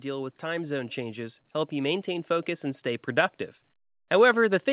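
From 0.05 to 3.4 s the automatic gain rises: the control judges the input too quiet and raises its gain by about 6 dB. Voice and background swell together over several seconds, a slow steady climb rather than the quick syllable-by-syllable pumping of a compressor. Throughout, the sound is band-limited with nothing above 4 kHz, which fits a G.711 call codec at 64 kbps.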